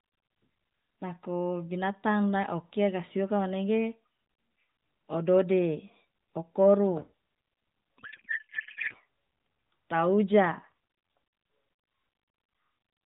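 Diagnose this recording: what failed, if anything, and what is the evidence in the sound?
From 7.98 to 8.95 s the speech turns into garbled warble that barely tracks it. This is a codec payload misread: octet-aligned AMR-NB frames are being decoded as bandwidth-efficient.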